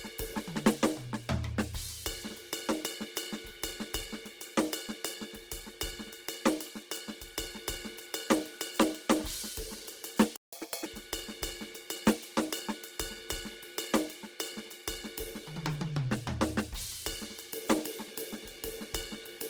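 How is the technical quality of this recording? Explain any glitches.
The music is damaged by heavy compression throughout and a brief dropout near the middle, followed by a fast, high-pitched recovery.

Opus compression: The sound points to Opus in its music (CELT) mode, likely at a very low bitrate around 16 kbps. Starved bands are refilled with folded or noise content, so the full bandwidth survives to about 20.3 kHz, but tones turn grainy, rough and hissy throughout.

Playback stall: From 10.36 to 10.53 s, the player likely ran short of data or was blocked, so output went silent for about 165 ms. The music cuts out in mid-flow, leaving an abrupt gap before it resumes.

Catch-up at higher speed: From 10.53 to 10.86 s, the player resamples its backlog at 1.5 times normal speed to recover the lost time. The music briefly rushes and jumps up by roughly seven semitones, then drops back to normal tempo and pitch.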